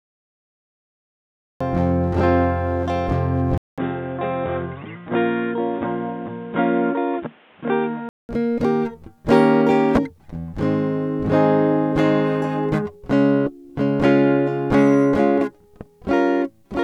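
A music clip that opens with a cut-off start: digital silence runs until 1.6 s, and the music then enters abruptly in the middle of a sound, with no attack or fade leading into it. A deliberate fade-in would rise gradually from quiet. This one jumps straight to full level, which shows the recording or stream began late rather than the music starting there.

From 3.58 s to 8.29 s the sound turns dull and boxy, with nothing above 3.8 kHz, and then clears up again. A gap of about 200 ms marks the change. The likely cause is the input switching to a poorer device. A plain low-pass filter or a bandwidth-limited codec would only remove the top end. Here new background noise arrives as well, sitting roughly 30 dB under the music, and the level falls by around 5 dB. That points to a different microphone or headset profile with its own noise and gain.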